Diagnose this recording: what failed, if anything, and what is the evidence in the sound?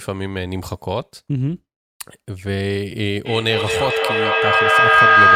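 Feedback howl starts at 3.26 s and never stops. The stage is call processing. Two devices in one room form an acoustic loop that gains level on each trip. A tone near 1.5 kHz builds, with repeats roughly every 200 ms, peaking about 10 dB above the speech.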